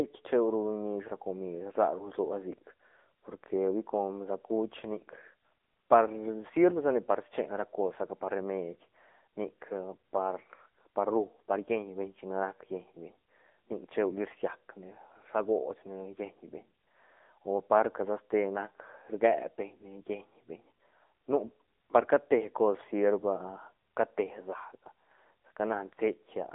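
Thin, boxy speech with a buzzy, synthetic edge throughout, and nothing above 3.8 kHz: AMR narrowband mobile codec damage, at a low bitrate around 8 kbps, band-limited to about 250 Hz–3.6 kHz.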